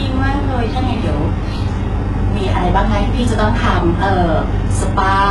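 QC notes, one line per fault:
Throughout: likely HE-AAC compression at a very low bitrate near 12 kbps; copied-up treble makes s sounds gritty and metallic, with nothing above 11.4 kHz.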